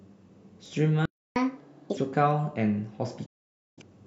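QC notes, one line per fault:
0.66 s and 2.31 s, dropped samples: Two single sharp clicks, each a thin vertical line across the spectrum. The likely cause is a few samples missing from the stream, well under a millisecond, so the waveform jumps abruptly to a later value without removing any audible speech.
1.05–1.36 s, playback stall: The speech halts mid-flow and the output goes silent for about 305 ms before resuming. This is likely the player running short of data or its thread being blocked, leaving nothing to output until it recovered.
1.36–1.97 s, catch-up at higher speed: Straight after the gap the speech runs fast and high, at 1.5 times normal speed and roughly seven semitones up, then settles back. The player is resampling its backlog to win back the time lost in the stall.
3.26–3.82 s, digital broadcast dropout: The speech fades to silence over about 8 ms and stays muted for 512 ms before returning further on, with that stretch lost. 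The receiver muted on bad or missing frames, a gap that fits about a dozen lost frames.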